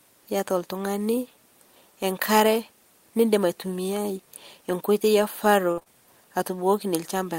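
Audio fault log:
5.71–5.79 s, burst of packet loss: About 60 ms of the stream never arrived, and the receiver covered roughly 59 ms of it by extending the preceding sound while turning it down, so the gap comes across as a brief held, fading continuation before the audio jumps ahead. On a spectrogram the harmonics or noise from just before 5.71 s stretch flat and dim across the gap. The waveform shows a smooth, decaying repeat of the last cycles in place of real detail.
5.79–5.83 s and 5.83–5.88 s, short concealed packet loss: Right after the burst, two further 20 ms pieces went missing back to back, patched with about 16 ms and 27 ms of synthesized continuation then blended into the returning audio. This prolongs the smear left by the burst and adds a wobble as real signal returns. A spectrogram shows blurred, slightly repeated texture with soft seams at 5.83 s and 5.88 s. The waveform has short, overly regular stretches with soft blends at the joins.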